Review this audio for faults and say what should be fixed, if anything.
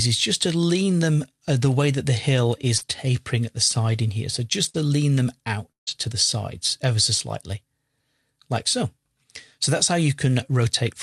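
Short concealed packet loss at 2.77 to 2.84 s: about 40 ms of the stream arrived too late for the decoder. The receiver extended the preceding sound to fill roughly 36 ms, then crossfaded back, leaving a brief smear or wobble where a short sound may drop out.

Lost packet rebuilt from error correction at 2.81, 4.74 and 5.87 s: in each case a single 20 ms packet was lost, and the decoder played the low-bitrate copy carried in the following packet. There is no gap, but each of those frames sounds rougher and noisier than the surrounding audio.

Burst of packet loss at 4.69 to 4.84 s: about 40 ms of consecutive packets never played in time. Concealment stretched the last sound over about 51 ms while fading it, giving a held buzz or fading hiss. Around 7 ms was discarded, so playback resumes slightly further on.

Long network dropout at 5.71 to 5.90 s: the audio holds and fades for about 150 ms, with roughly 140 ms of that near silence, then returns with about 160 ms missing. 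A stretch where no packets arrived is the likely cause.

To prevent this, stabilise the network path by prioritising call traffic and reducing congestion, and allow a somewhat deeper jitter buffer so late packets can still be played.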